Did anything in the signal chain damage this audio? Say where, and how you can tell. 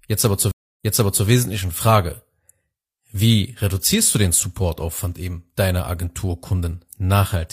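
Yes. In this speech clip, a stream reconnect at the network and playback stage breaks the audio between 0.51 and 1.26 s. The sound drops out for 284 ms, then picks up again about half a second back, repeating 464 ms of material that was already heard. That pattern points to the connection failing, the player reopening the stream and starting a new decoder mid-stream, and the server resending a burst of buffered audio from slightly before the break.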